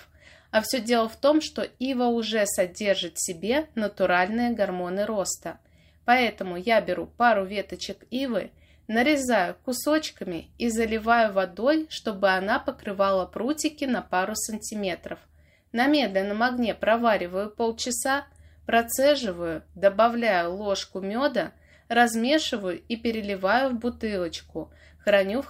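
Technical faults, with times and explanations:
No technical faults detected.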